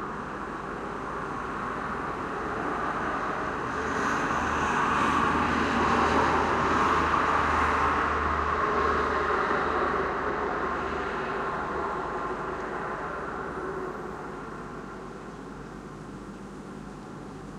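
There are no technical faults to describe in this audio.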